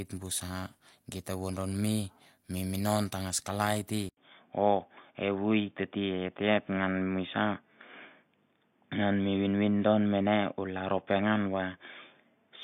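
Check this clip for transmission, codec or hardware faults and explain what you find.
One fault is present. At 4.09 s the audio drops out for 80 ms, then returns dull and boxy with nothing above 3.6 kHz, a level shift of around 5 dB and a new noise floor roughly 45 dB down, lasting to the end. This points to the input likely switching to a poorer device whose narrower band, gain and self-noise replace the original.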